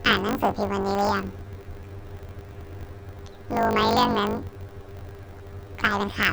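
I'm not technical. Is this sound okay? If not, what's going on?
No. From start to finish the speech has a harsh, robotic buzz, a steady rattle about fifty times a second laid over everything. The fault is called planar audio read as interleaved. The recording stores sound in short 20-millisecond chunks, all of the left channel then all of the right, but it's played back as if the two alternated. Each chunk gets squeezed to double speed and played twice, so the chopping becomes that buzz.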